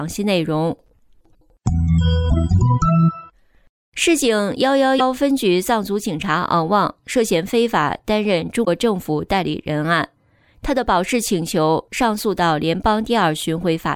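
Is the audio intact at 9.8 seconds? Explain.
Yes, the audio at 9.8 seconds is intact, with no audible fault at that moment.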